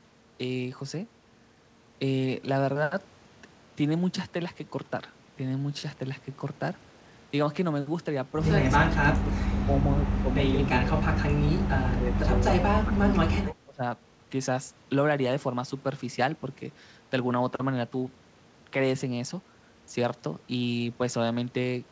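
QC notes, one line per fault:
8.78 to 13.82 s, speech suppressed in double talk: the echo canceller, likely confusing the talker with loudspeaker echo, ducked the speech at 8.78–9.31, 9.63–10.04, 10.21–12.62 and 12.83–13.82 s, by up to about 25 dB, leaving it chopped and faint.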